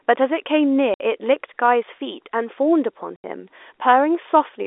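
At 0.94 to 1.00 s and 3.16 to 3.24 s, packet loss filled with silence cuts 60 and 80 ms holes into the speech, which fits 20 ms packets. Each gap starts and ends abruptly. On the waveform it is a flat line, and on the spectrogram an empty vertical band with hard edges.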